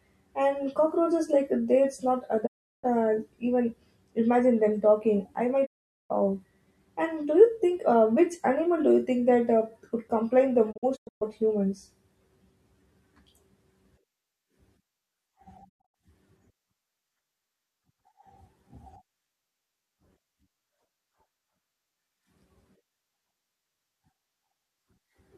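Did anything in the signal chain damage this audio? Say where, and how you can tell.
Yes: a digital broadcast dropout at four points in this speech: 2.45 to 2.85 s, 5.65 to 6.12 s, 10.71 to 11.23 s and 15.68 to 15.96 s. The first two are single silences of 360 and 432 ms. The last two break into short holes, 288 ms lost across 480 ms (longest 120 ms) and 192 ms across 240 ms (longest 96 ms). Each fades to silence over 20 ms, the signature of a receiver muting on corrupt frames at the reception and decoding stage.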